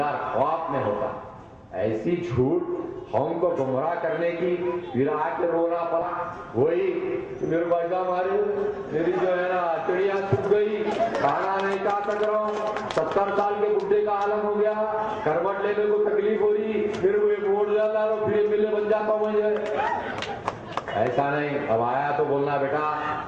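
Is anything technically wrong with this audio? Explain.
Yes, two related timing faults sit close together. At 6.01 to 6.03 s there's a skip ahead: about a second of audio got dropped, probably when the jitter buffer overflowed with later audio already queued, so playback jumps straight across with no gap or fill.

Then from 6.57 to 8.47 s a jitter buffer speed-up kicks in. The buffer was still holding more than it wanted, so the receiver kept trimming tiny pitch-period-sized slices, about a tenth of a second in total. Things run roughly 6% fast at unchanged pitch, sounding slightly rushed.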